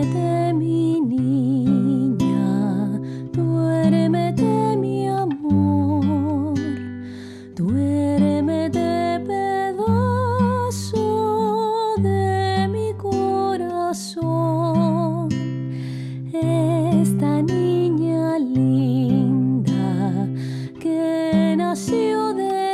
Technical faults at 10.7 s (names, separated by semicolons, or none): none